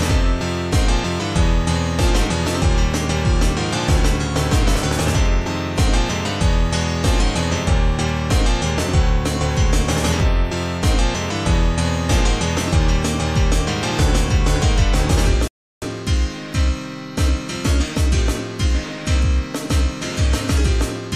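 At 15.48 s the audio stops dead and goes silent until 15.82 s, then picks up exactly where it left off. That's a rebuffering stall: the player ran dry of downloaded data and simply waited for more to arrive before carrying on. Nothing is skipped or repeated, so the content stays intact, but about 342 ms of dead air gets inserted, which you hear as an abrupt pause that wasn't in the original timing.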